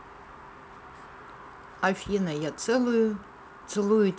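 No technical faults can be heard in this speech clip. It carries the character of G.722 wideband telephone coding, with the band reaching to about 7 kHz and any hiss from the coarsely coded upper band no more than faint, which fits the full 64 kbit/s mode.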